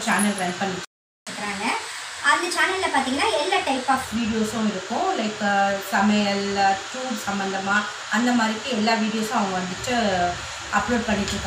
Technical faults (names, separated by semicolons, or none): playback stall; catch-up at higher speed